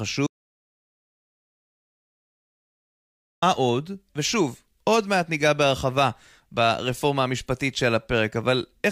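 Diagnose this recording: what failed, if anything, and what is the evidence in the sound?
The speech cuts to an audio dropout to silence at 0.27 s and returns abruptly at 3.42 s, losing about 3.15 s. The gap is dead silence with no room tone, unlike a noise gate's gradual fade, which points to a likely input-side loss, such as a disconnected device or link, while the recorder kept writing.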